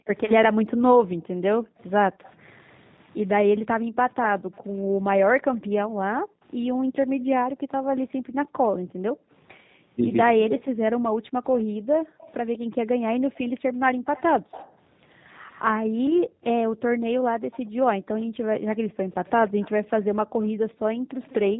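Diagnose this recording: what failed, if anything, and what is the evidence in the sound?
The codec stage is the first problem, audible throughout. The speech has the rough, slightly synthetic grain of a low-rate CELP coder, and nothing above 4 kHz survives. The texture fits the G.729 codec (G.729A at 8 kbit/s): the speech is rebuilt from a short-term filter, a pitch predictor and a few pulses per subframe. A simple low-pass filter would leave the speech smooth, not grainy.

Call processing lets an echo leak through in four places: 0.05 to 2.3 s, 5.55 to 5.6 s, 11.59 to 15.6 s and 17.51 to 21.34 s. Each time a faint copy of the far-end speech follows it by 144 ms. It sits about 30 dB below the speech at first, rises to about 20 dB below in the 11.59 s stretch, and is about 25 dB below at the end. The likely cause is a far-end loudspeaker whose echo canceller let some of the returning audio through. 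The fixed lag separates it from room reverberation.

The echo canceller also gates the background, between 0.48 and 2.24 s (around 0.7 s of dips in all) and between 3.85 and 14.12 s (around 5 s in all). The room sound drops by up to about 40 dB and then comes back. Because the dips follow the far-end activity rather than the speaker's pauses, they point to the canceller clamping the microphone path, not to a noise gate or a dropout.

From 10.35 to 10.85 s the talker's own speech is suppressed in double talk. It falls by roughly 40 dB for about half a second. The likely cause is that both sides spoke at once and the canceller could not separate the talker from the loudspeaker echo. Background gating touches only room sound, but here the speech itself is cut.

Network packet loss, concealed by the speech codec, appears at 16.07 to 16.21 s and 20.71 to 20.75 s. Each time the voice smears briefly and fades, which fits a single lost 10 ms frame. 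The decoder extrapolated the previous pitch and filter. At 16.07 s the voice stays weak after the gap, because each frame is predicted from the last. That slow recovery rules out a plain dropout or click.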